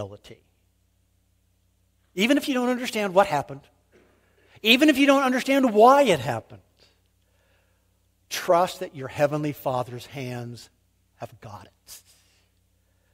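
Listening through the speech recording, nothing stood out as a technical problem at any point.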